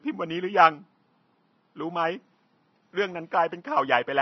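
From start to end of the speech the treble sounds hissy and grainy, with roughened tones and smeared consonant onsets, plainly audible throughout. Likely cause: Vorbis compression at a low bitrate, perhaps around 23 kbps, where the upper band is quantised so coarsely that its detail turns to noise of similar energy. A steady hiss, by contrast, would sit evenly under the speech. Here the grain follows the speech, while the room noise stays about 54 dB lower.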